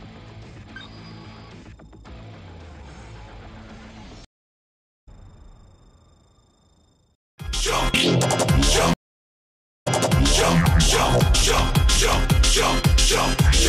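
The audio drops out for about 0.8 s at 4.25 s, returning roughly 0.7 s further on, and for about 0.9 s at 8.93 s, returning 0.73 s earlier with a short stretch repeated. Both are stream reconnects, where the connection broke and a fresh decoder picked up mid-stream.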